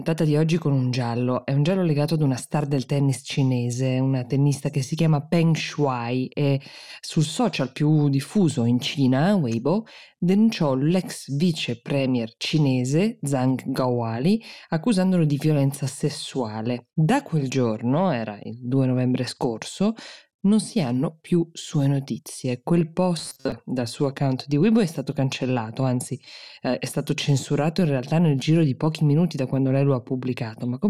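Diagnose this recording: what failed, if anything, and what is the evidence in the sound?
The failure sits at the driver or buffer stage. From 23.19 to 23.52 s the speech collapses into robotic sound from repeated short buffers: a rigid, metallic buzz at 133 Hz that loosely tracks the speech. The likely cause is audio arriving too late, with the playback side looping the last 7.5 ms block so that roughly half the material is repeated rather than new. On a spectrogram this shows as flat, evenly spaced harmonics at multiples of 133 Hz. The waveform shows identical cycles tiling every 7.5 ms.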